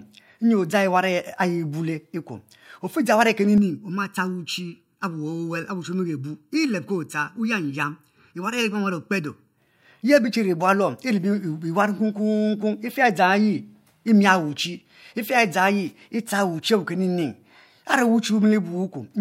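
From 3.58 s to 9.58 s the speech turns hollow and phasey, the signature of channel delay (comb filtering). One channel arrives late by under a millisecond, and when the two are folded to mono the shared sound cancels at evenly spaced frequencies, the first notch near 700 Hz. Unlike a phaser, these notches stay fixed rather than sweeping. Unlike plain low-pass dullness, the treble isn't simply rolled off but broken into a regular pattern of gaps.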